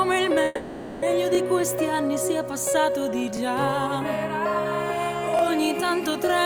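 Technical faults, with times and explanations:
0.45 to 1.04 s, call audio freeze: the sound stalls for about 0.57 s, filled by a fading buzz or hiss, then resumes where it stopped. Delayed packets likely emptied the jitter buffer.
1.35, 3.37 and 5.39 s, overlapping chunks: a 20 ms piece plays twice at each join, heard as a click or stutter. The joins fall every 2 s, matching the chunk length.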